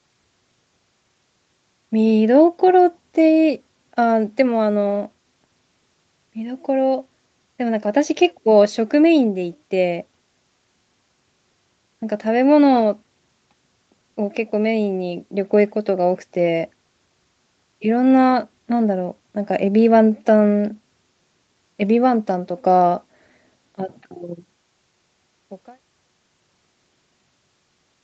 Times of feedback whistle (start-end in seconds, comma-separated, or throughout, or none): none